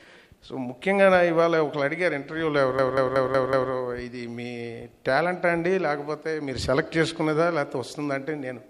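From 2.79 to 3.72 s, a system hang loop replays one 186 ms buffer five times, a 5.4 Hz machine-gun stutter, showing as identical repeated waveform blocks.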